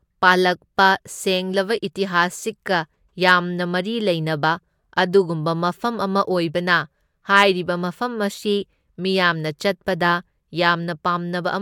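Nothing here needs pointing out: the recording runs along without any technical fault turning up at any point.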